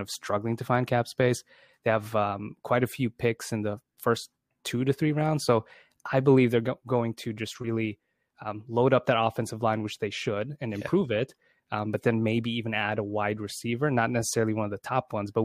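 A recording of speech, with no technical fault to point to anywhere in it. Nothing in the audio breaks, drops out or changes character at any moment that would call for a time or a cause.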